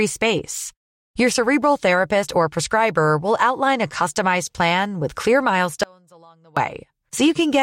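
At 5.83 s, just after "customized plan with clear", the speech cuts out abruptly until 6.57 s. It is an audio dropout to a faint residue. Only a faint trace remains, about 30 dB down. The signal was likely lost while the path stayed live.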